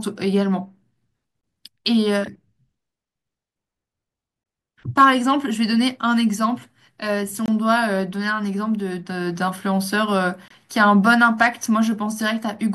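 Gaps between chunks at 1.41, 7.46 and 10.48 s interrupt this speech clip: each is a hard-edged silence of about 23 ms, falling on the joins of 3-second chunks. No sound is lost; playback simply resumes late at each join, likely from codec padding.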